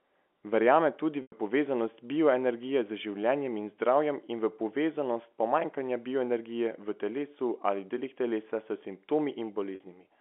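Packet loss with pitch repetition occurs at 1.22–1.32 s, just before "povezanost bioenergije z življenjem", and at 9.75–9.80 s. The receiver loops the last pitch period across each 100 ms and 50 ms gap, producing a brief buzzy hold that fades out.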